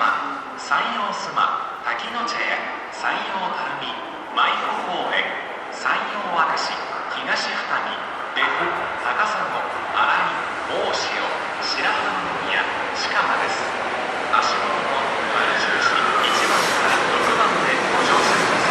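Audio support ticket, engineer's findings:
No faults found in playback.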